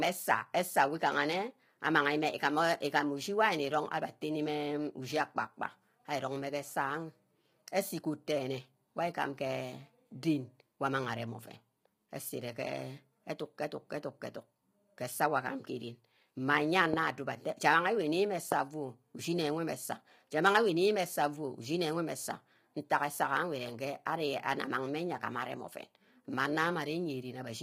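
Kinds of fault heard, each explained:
Low-delay AAC compression: Throughout, the speech sounds rough and grainy, with noise between harmonics and a thin, synthetic top, likely from AAC-ELD at a low rate such as 24 kbps, not broadband hiss.
Loud pop: Single sharp pops at 16.94 s and 18.52 s, well above the speech, which carries on underneath, unlike a dropout; likely voltage pulses from a plug, switch or static.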